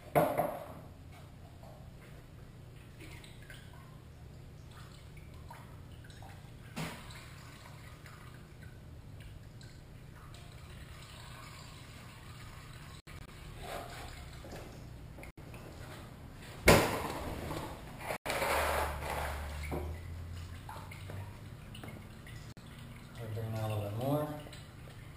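Audio packets likely failed to reach the headphones in time, a Bluetooth dropout: the sound cuts to silence and resumes further on, as though it had played through. This happens at 13.0 s (about 116 ms lost in broken gaps across 0.28 s), 15.31 s (70 ms), 18.16 s (93 ms) and 22.52 s (46 ms).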